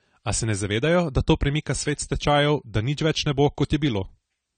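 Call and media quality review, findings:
AAC compression, whole speech clip. Dull, smeared top end; fizzy, warbling sibilants. Nothing above 9 kHz. Likely an AAC-LC encoder short of bits, consistent with about 32 kbps, coarsely quantising and dropping high bands. Spectrogram: flat ceiling at 9 kHz, patchy holes and noise-filled blocks in the upper bands, smeared around consonants.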